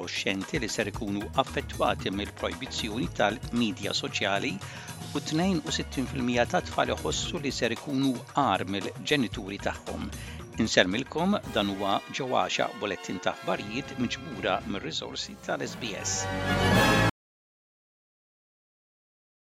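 At 17.10 s the sound cuts off abruptly. From there to the end, about 2.35 s, there is silence. No room tone or background hiss remains. The signal never returns. This is an audio dropout to silence. The input feed was likely lost, perhaps through a disconnected device, a broken link or an accidental mute, while the recorder kept writing silence. Whatever happened after 17.10 s is missing.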